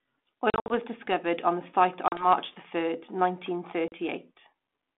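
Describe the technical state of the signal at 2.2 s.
Packet loss on an ADPCM call covers 2.08 to 2.28 s. About 40 ms of speech, roughly two packets, drops out as a hard-edged silent gap. The G.726 decoder's adaptive predictor and step size then fall out of step with the sender's, so the resumed speech is briefly distorted before recovering.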